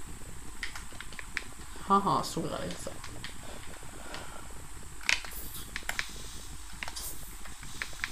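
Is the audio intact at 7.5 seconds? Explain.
Yes, at 7.5 seconds the audio is intact, with no dropout, click, distortion or other fault to be heard at that moment.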